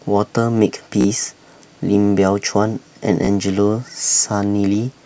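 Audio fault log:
1.01–1.06 s and 3.25–3.28 s, repeated buffer: the same 16 ms slice of speech plays three extra times, then two, with a hard join at each repeat. Fresh audio arrived late, so the device replayed its last block, which fits a 256-sample buffer. The repeats are heard as brief buzzy stutters, with essentially no speech lost.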